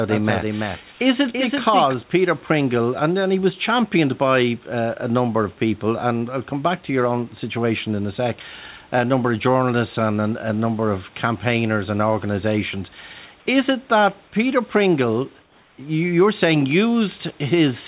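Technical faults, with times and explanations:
0.00–1.94 s, doubled audio track: already under way when the clip opens, a second full-band copy of the speech trails the original by about 300 ms at roughly 5 dB lower, giving a flat, stuttering echo with no reverberant tail. It cuts off abruptly at 1.94 s. A spectrogram shows every harmonic and onset repeated a fixed distance to the right. The waveform shows a smaller duplicate of each burst. The likely cause is a second, slower capture path or an edit holding two misaligned copies.
0.92–1.00 s and 15.42–15.78 s, comfort noise in place of the background: during these pauses, lasting 80 ms and then 360 ms, the natural room background is replaced by a steady, featureless hiss that is about 4 dB and then about 3 dB quieter. This is likely discontinuous transmission: the sender stopped sending audio once its detector heard no speech, and the receiver filled the gap with synthetic noise roughly matched to the background. 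On a spectrogram the textured noise floor turns into a smooth, uniform band. In the waveform the floor steps down slightly and goes evenly flat.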